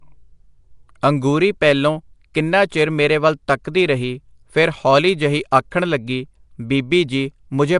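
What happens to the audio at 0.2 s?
Nellymoser compression is present at 0.2 s and throughout: the speech has a rough, hissy halo and smeared, underwater quality, with nothing above 10.6 kHz. This likely comes from the Flash-era codec coding short blocks at a fixed bit depth, leaving weak bands to be filled with noise.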